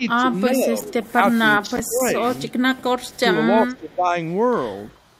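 Speech with speech suppressed in double talk at 0–1.42, 1.62–2.25 and 3.32–4.15 s, dipping by up to about 15 dB, likely an echo canceller ducking while both sides talk. Faint echo leak, a copy delayed 369 ms and roughly 30 to 40 dB down, is heard at 1.67–1.87, 2.49–2.83, 2.99–3.19 and 4.92–4.97 s, likely from incomplete loudspeaker echo cancellation.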